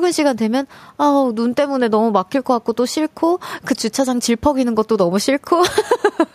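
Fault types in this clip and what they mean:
No faults can be heard anywhere in this recording.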